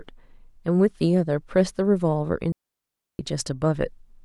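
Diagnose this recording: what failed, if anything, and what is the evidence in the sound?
A digital wireless dropout at the radio link stage: the speech cuts to near silence from 2.52 to 3.19 s, a hole of about 0.67 s with a very short fade and no noise burst on either side. The receiver muted after losing too much data.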